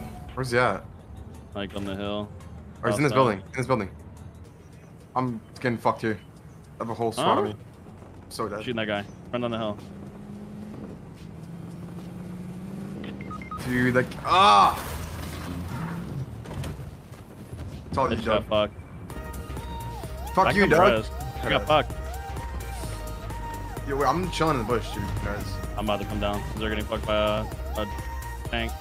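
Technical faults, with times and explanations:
No technical faults can be heard anywhere in this clip. Nothing in it calls for a time or an explanation.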